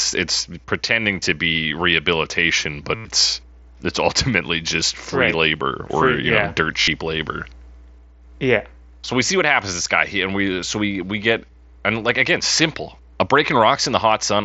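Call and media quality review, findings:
Concealed Bluetooth headset packet loss, 2.95–3.05 s and 6.81–6.88 s. Runs of about 100 ms and 60 ms lost between headset and phone; receiver repeats recent waveform, giving a buzzy held tone, slight warble on recovery. Heard through the mSBC wideband path.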